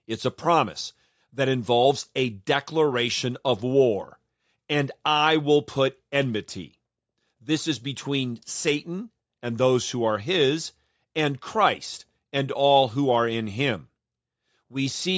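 No faults in this speech clip: it has passed through call microphone processing, which trims the lowest bass and leaves nothing above 8 kHz, as expected for that path.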